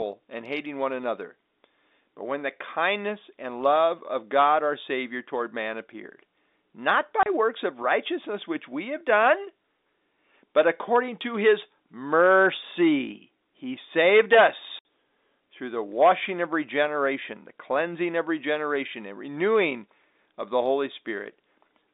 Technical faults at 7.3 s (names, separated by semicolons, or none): packet loss filled with silence